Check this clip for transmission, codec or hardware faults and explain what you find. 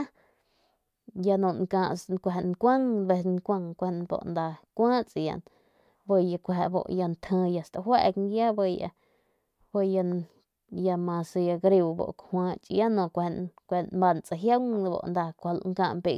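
Nothing wrong turns up here; the speech comes across steady and intact, with no transmission, codec or hardware trouble to point to.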